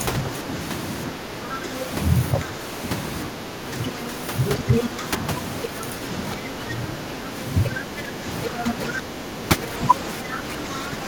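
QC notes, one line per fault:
1.12–1.71 s, 2.4–2.61 s, 3.28–3.78 s, 4.57–7.06 s, 7.73–11.07 s: speech suppressed in double talk. The talker dips by about 10 to 15 dB. The echo canceller likely ducked both voices while both sides talked.
4.71–4.84 s, 5.63–5.68 s, 7.65–8.91 s: other side's voice leaking through. A second voice breaks in, near the talker's level at first, then quieter. Echo was likely left uncancelled.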